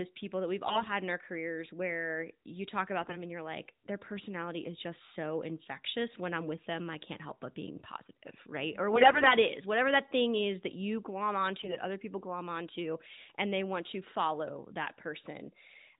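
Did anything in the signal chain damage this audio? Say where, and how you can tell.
Yes. At 0.66–0.87, 3.02–3.22, 8.92–9.36 and 11.60–11.78 s the sound turns hoarse and gargly at steady pitch and level. These are AMR bit errors from a weak network link flipping unprotected frame bits.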